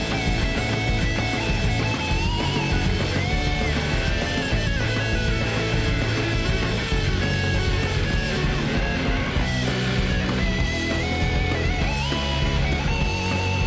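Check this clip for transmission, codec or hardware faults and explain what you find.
No faults detected.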